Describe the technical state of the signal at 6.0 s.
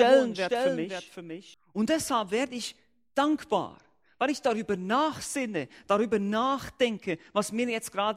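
At 6.0 s the signal is intact, with no audible fault at that point.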